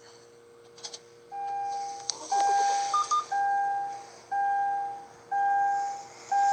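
No technical faults can be heard anywhere in this recording of sounds. Nothing in the audio calls for a time or value to be noted.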